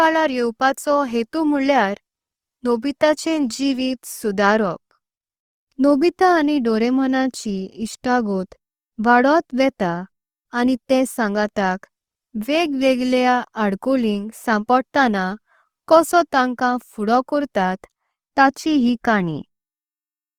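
Opus compression runs throughout this speech clip, audibly grainy and rough, with noisy texture replacing fine detail while the bandwidth stays full up to about 20.3 kHz. The likely cause is CELT-mode Opus at a low rate near 24 kbps, filling bit-starved bands with folded or noise energy.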